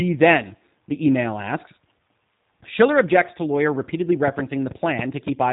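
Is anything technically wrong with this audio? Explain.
Yes. Throughout the speech, the audio carries plainly audible G.729 codec damage, consistent with an 8 kbit/s narrowband VoIP path. The codec rebuilds each short frame from a modelled vocal-tract filter, a pitch predictor and a few sparse pulses rather than the true waveform, so the speech sounds rough and slightly synthetic. On a spectrogram, energy stops abruptly near 3.8 kHz, leaving an empty band above, and harmonics look smeared rather than crisp.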